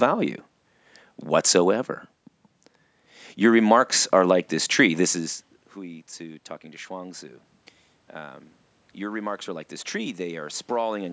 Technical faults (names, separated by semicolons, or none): automatic gain rising